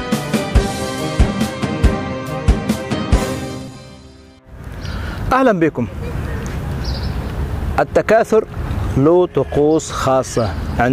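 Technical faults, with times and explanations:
1.24–1.28 s, 3.67–3.76 s, 7.13–7.30 s and 10.55–10.72 s: frames out of order. Two adjacent blocks of audio swap places, about 20, 40, 80 and 80 ms each, so each stretch plays its halves reversed. This gives a garbled flutter and no lost time.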